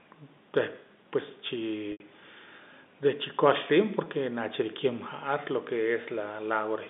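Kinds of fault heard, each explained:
Packet loss with pitch repetition: missing audio is bridged by repeating the last pitch period and fading it down. At 1.92 s an 80 ms gap, consistent with four 20 ms packets, fades into silence before the speech returns with a short cross-fade; at 4.04 s a 20 ms loss gives a brief buzz.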